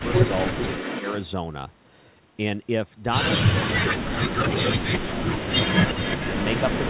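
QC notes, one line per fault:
0.0–0.33 s, 3.56–3.73 s, 3.93–5.49 s, 6.17–6.24 s: speech suppressed in double talk. The speech dips by about 15, 35, 40 and 20 dB, longest near 4–5.5 s. Likely the echo canceller ducked the near talker while the far side spoke.
0.0–1.28 s, 5.51–6.89 s: echo leak. A delayed copy trails the speech by 354 and 362 ms, about 10 dB below it. Likely a loudspeaker echo the loudspeaker side's canceller failed to remove.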